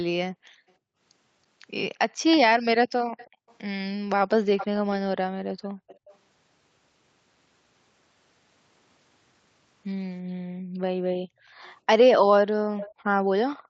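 At 3.17 to 3.54 s a faint delayed copy of the speech trails the talker by 325 ms, about 25 dB down. This is an echo leak, likely from a far-end loudspeaker whose echo canceller let part of the returning sound through. It recurs with a steady 383 ms lag at 4.57 to 4.95 s (louder, about 15 dB down), 5.48 to 6.16 s (about 25 dB down), 11.64 to 11.72 s (a faint scrap, about 35 dB down) and 12.78 to 12.92 s (about 15 dB down). The fixed lag and the separate copy set it apart from room reverberation, which smears continuously from the direct sound.

Overlapping the first echo, the room background gated by the echo canceller drops by up to about 40 dB between 3.3 and 3.48 s. The canceller clamped the microphone while the loudspeaker played, and the background comes straight back, for roughly a fifth of a second. It happens again at 5.61 to 5.88 s, dipping about 30 dB, and across 10.47 to 11.61 s, dipping about 29 dB, with around 0.7 s affected there. 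The dips line up with far-end playback, which tells them apart from packet loss dropouts.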